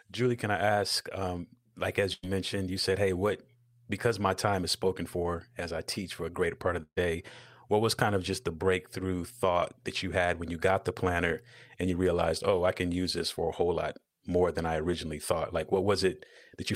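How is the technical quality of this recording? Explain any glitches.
The recording has two glitches, both bursts of packet loss. At 2.13–2.25 s, after "um like", a 93 ms fill replaces 100 ms of lost audio, and the speech resumes at "mentioned you said hey". At 6.83–6.98 s, after "a greater part of", a 138 ms fill stands in for 140 ms, and 50 ms of it is silent. In each gap the receiver extends the last sound and fades it down. That leaves a held buzz or fading hiss and then a jump forward, unlike a plain dropout to silence.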